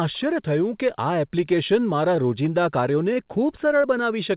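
Speech heard over a call link with nothing above 4 kHz, which fits G.711 A-law at 64 kbps, has two brief glitches near the end. At 3.13 to 3.17 s there is a short stall from a late packet. A packet arrived after it was due, so the receiver held the last sound for about 20 ms and then resumed exactly where it left off. Nothing is lost, but the sound is drawn out slightly, and everything afterwards runs 20 ms later. At 3.81 to 3.85 s a short concealed packet loss sounds similar but behaves differently. About 20 ms of audio never arrived, and the receiver filled the gap by extending the preceding sound before blending back in. The result is a small smear or wobble, and that stretch of sound is actually missing rather than just delayed.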